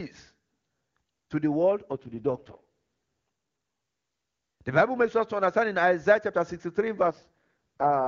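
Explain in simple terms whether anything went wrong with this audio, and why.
AMR rate drop, from 1.91 to 2.63 s just after "to the world" and again from 7.02 s to the end at 8.07 s: the phone network, facing a weak radio link, switched the HD Voice codec to a much lower rate, so the speech turns rough and robotic without dropping out.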